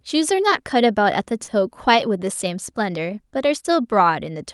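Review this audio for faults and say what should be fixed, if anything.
Short concealed packet loss at 1.43–1.50 s: about 40 ms of audio never reached the decoder in time, so the decoder stretched the preceding sound into a brief smear. A plain dropout would leave a silent gap instead. To prevent it, give the network path more headroom or let the jitter buffer hold slightly more delay so late packets still arrive in time.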